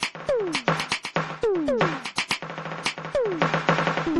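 Throughout the music, nothing is present above 12.2 kHz, and the artefacts of two different codecs are heard together. This is likely transcoding between lossy codecs, consistent with a low-rate MP3 re-encoded to Opus, the second stage compounding the first's damage.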